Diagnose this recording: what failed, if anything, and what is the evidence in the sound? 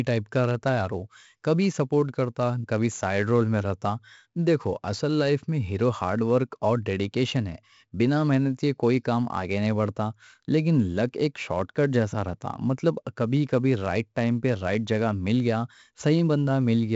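Codec stage: heavy 4-bit ADPCM compression throughout. Coarse prediction steps leave gritty hiss on loud speech and rough attacks. Nothing above 7.7 kHz, fitting 64 kbps.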